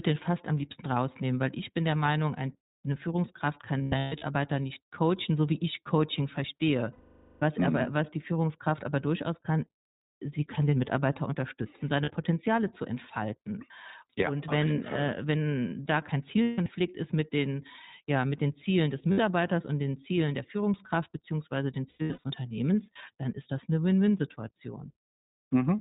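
iLBC codec, throughout: the speech is band-limited below 4 kHz and sounds plainly rough and synthetic, which fits iLBC at about 15.2 kbps. Each 20 ms frame's excitation is coded on its own, so the texture stays grainy from frame to frame.

Lost iLBC frames at 3.78–4.24 s, 6.92–7.44 s, 12.04 s, 16.42–16.68 s, 19.12–19.20 s and 21.90–22.31 s: when packets drop out, the decoder repeats the last pitch cycle blended with noise, giving a held, buzzy vowel. The longest is 500 ms at 6.92 s. The losses at 3.78 s, before "nicht coachen so wie", and at 21.90 s, after "beziehungsweise den", total 300 ms each, scattered in short bursts. The one at 16.42 s totals 180 ms. Brief 40 and 60 ms gaps come at 12.04 s and just before "und den". Clean speech returns almost immediately after each gap.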